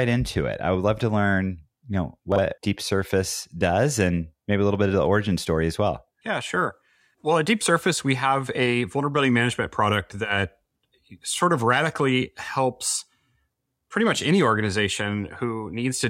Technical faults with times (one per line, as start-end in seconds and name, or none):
2.32-2.38 chunks out of order